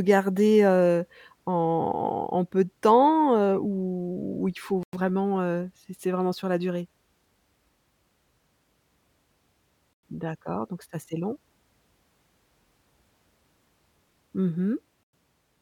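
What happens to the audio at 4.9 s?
The speech arrives in 5-second chunks, and 100 ms of silence is left before the next chunk. This gap between chunks runs from 4.83 to 4.93 s. After "heu ou il faut" the sound drops out briefly, then resumes at "heu c'est c'est vraiment" with nothing missing.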